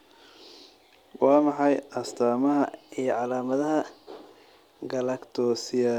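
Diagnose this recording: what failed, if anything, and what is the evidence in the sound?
Between 2.64 and 5.19 s the speech jumps to about 1.09 times normal speed and rises by roughly 1.5 semitones. This is a wrong sample rate fault at the playback or converter clocking stage. The samples are clocked out faster than they were captured, with no resampling, which fits 44.1 kHz material played at 48 kHz. On a spectrogram, harmonics and formants in that span sit shifted upward and syllables look compressed in time. The waveform shows shortened periods.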